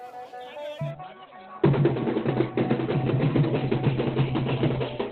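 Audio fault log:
0.91–5.12 s, adaptive stream at a lower bitrate: with no gap, the treble abruptly disappears above 4.2 kHz and the sound turns smeared to the end. The stream has switched to a leaner version, which fits Opus stepping down from about 64 to about 12 kbit/s.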